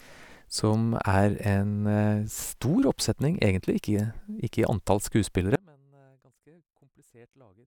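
Speech cuts out abruptly at 5.56 s in an audio dropout to a faint residue that lasts to the end. Only a faint sound remains, roughly 35 dB below normal, likely from signal loss ahead of a still-live path. The waveform collapses to a thin trace, and the spectrogram drops abruptly to faint traces.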